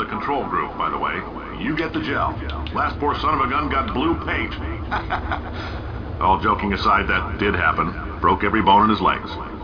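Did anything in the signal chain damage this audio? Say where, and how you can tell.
No, nothing along the chain from capture to playback audibly damaged this signal.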